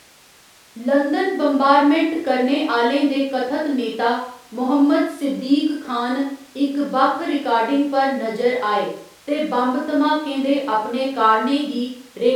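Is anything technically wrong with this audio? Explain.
No, no technical faults detected.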